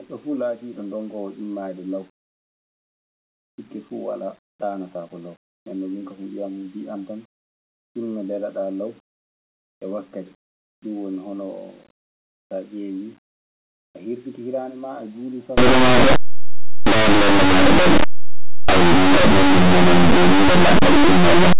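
From 15.58 s to the end, linear audio is read as companded: plain 8-bit samples are decoded as mu-law, so values just on one side of zero become the largest outputs while those on the other side stay small, heard as very loud, harsh distortion.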